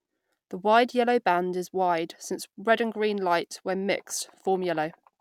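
No technical faults can be heard in this recording of speech, and the signal stays continuous and intact throughout.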